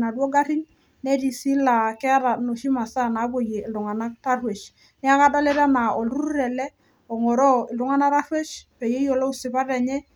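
No technical faults are audible.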